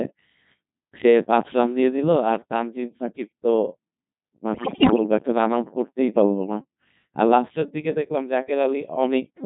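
This is speech that's been through a Codec 2 vocoder the whole way, and it's heavily damaged. The decoder isn't rebuilding the original waveform at all. It's resynthesising the voice from sine waves driven by pitch, voicing, energy and a rough spectral envelope, so everything comes out robotic and buzzy. The amount of detail lost fits one of the low-rate modes, around 2.4 kbit/s. Then from about 4.54 to 5.04 s there's a burst of bit errors on digital voice radio, the kind you get at the edge of coverage. Roughly 15 percent of the bits are getting flipped, and because each bit in a vocoder this lean steers the pitch, level, voicing or spectrum of a whole frame, that half-second falls apart. The synthetic voice lurches in pitch and loudness, the tone colour swings around, and it breaks into warbling, bleepy gibberish before settling back into the plain vocoder sound.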